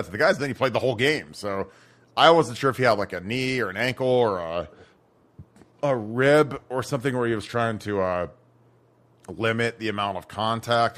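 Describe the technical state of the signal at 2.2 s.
At 2.2 s the speech signal is intact, with no dropout, click, distortion or other fault at that point.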